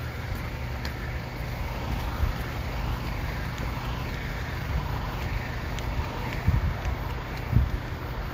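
From the first second to the end of the clip, a steady mains hum at 60 Hz sits under the audio. Power-line energy has leaked into the signal path, through a ground loop or coupling from a nearby transformer, and added a constant low tone. It is strong, roughly 10 dB below the wanted sound, so it is clearly audible as a continuous drone that does not change with the material.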